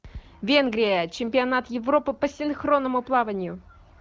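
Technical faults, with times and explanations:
No technical faults can be heard in this speech.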